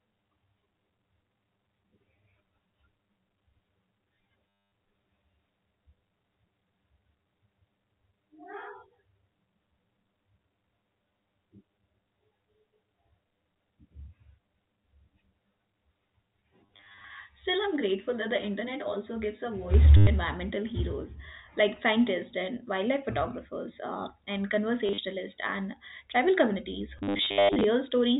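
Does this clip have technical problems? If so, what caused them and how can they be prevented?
Yes. Channel delay (comb filtering) affects the speech from 0.0 to 19.7 s. One channel runs around 10 ms late. Summed to mono, it cancels at evenly spaced frequencies, with the first notch about 50 Hz. The result is hollow and phasey. Align the channels before the mono downmix.

Packet loss with the last packet repeated occurs at 4.57 to 4.72 s, 16.66 to 17.04 s, 19.97 to 20.07 s before "environmental heroes like scientists", 24.86 to 24.98 s after "wildlife photographers uh and", and 26.98 to 27.64 s after "and tribal communities". Repeated fragments buzz as a robotic stutter. The buzz fits 10 ms packets. Use a stabler network path or better loss concealment.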